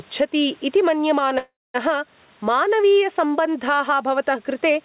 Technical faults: gain pumping; call audio freeze

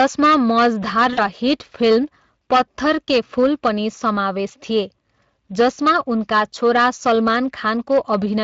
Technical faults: hard clipping; Speex codec; VoIP packet loss concealed by the speech codec

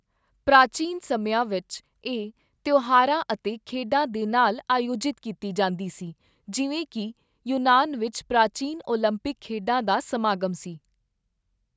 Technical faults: none

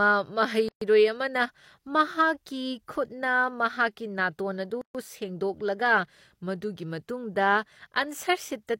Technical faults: gap at a join of encoded pieces

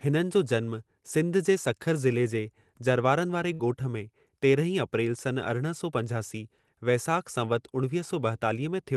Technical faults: burst of packet loss

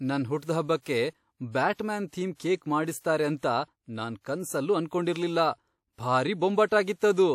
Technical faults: pre-echo

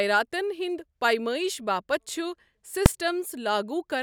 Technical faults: invalid numbers at full scale

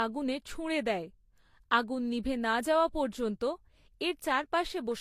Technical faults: transcoding between lossy codecs

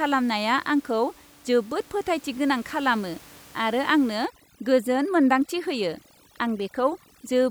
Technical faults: overdone noise removal

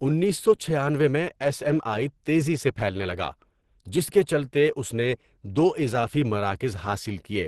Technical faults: Opus compression

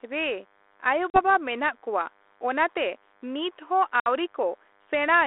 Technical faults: DECT cordless phone buzz; packet loss on an ADPCM call

